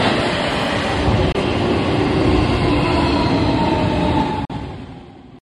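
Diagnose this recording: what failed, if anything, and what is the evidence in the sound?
The failure is in the wireless playback link: two short holes where the sound drops to silence, then resumes further along, as if it had kept playing. The first, 1.32 to 1.35 s, loses about 21 ms, the size of one packet; the second, 4.45 to 4.50 s, loses about 43 ms, which fits two. That's likely a Bluetooth dropout, with packets reaching the headphones too late and getting discarded.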